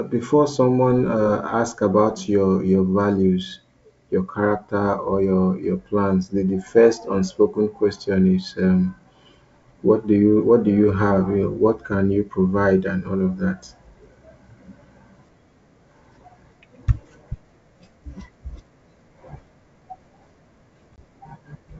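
At 20.96 to 20.99 s, near the end of the speech, there is packet loss on an ADPCM call: about 20 ms of audio, roughly a single packet, drops out and is filled with silence. The decoder's adaptive predictor and step size lose track of the sender's, so the speech resumes slightly distorted before settling. On a waveform this is a flat, hard-edged gap; a spectrogram shows a blank vertical stripe, set against the G.722 band up to 7 kHz.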